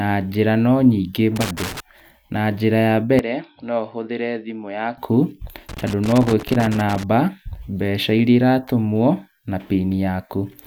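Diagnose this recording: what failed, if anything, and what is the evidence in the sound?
A loose connector crackle in the analogue wiring: a worn or dirty contact intermittently breaking the circuit as it shifted. The sound is chopped into irregular crackling bursts at 1.36 to 1.80 s, just after "njĩra no nyingĩ", and again from 5.69 to 7.03 s.

At the converter or driver stage, the input was likely switched to a poorer device from 3.19 to 4.98 s, just after "njĩra ya". With no gap at the change, the speech turns dull, with nothing above 5.5 kHz, drops about 10 dB in level, and gains a faint new noise floor roughly 50 dB down.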